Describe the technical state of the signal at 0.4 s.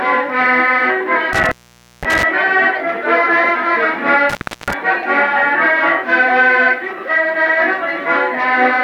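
At 0.4 s the audio is intact, with no audible fault in the signal at that moment.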